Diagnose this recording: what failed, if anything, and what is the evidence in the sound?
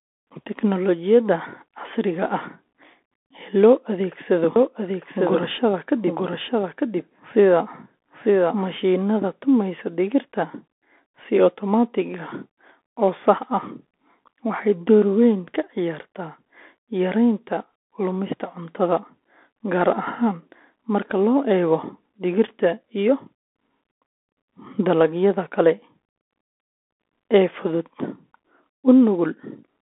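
Bluetooth CVSD headset codec, throughout: the band runs roughly 250 Hz to 3.5 kHz, with nothing above 3.8 kHz. S sounds turn scratchy, loud high passages break up, and a granular hiss sits under the speech. This fits a 64 kbps one-bit delta stream whose adaptive step can't keep pace.

Doubled audio track, 4.56 to 8.78 s, ending just before "tumaysa digirta": a full-band second copy trails about a second behind, a few dB quieter, with no room colour, and starts and stops abruptly. A second, slower capture path or an editing overlap is the likely cause.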